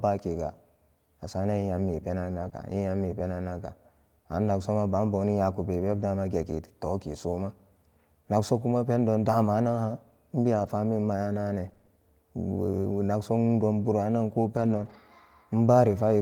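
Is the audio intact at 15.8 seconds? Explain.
Yes, the speech at 15.8 seconds plays through intact, with no dropout, click, distortion or other fault at that moment.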